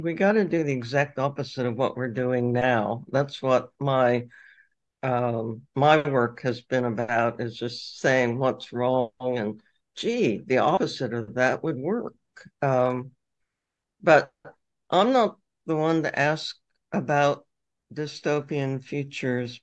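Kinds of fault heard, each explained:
No kind of fault is heard in this clip.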